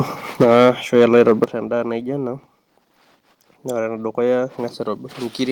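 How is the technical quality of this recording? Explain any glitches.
The technical quality takes a real hit in the first second and a half: the start clips hard, and then the level drops twice.

From 0.4 to 1.44 s there's microphone overload. The input was likely set too hot, pushing peaks about 7 dB past the converter's ceiling, so a few percent of samples get flattened at the top. You hear that as a harsh, crackly edge on the loudest syllables.

The microphone volume is stepped down at 0.44 s by about 3 dB, then at 1.44 s by about 9 dB. This is likely the call software reacting to the clipping by cutting the input gain, so the speech and the background both drop abruptly, and the second drop is much more obvious.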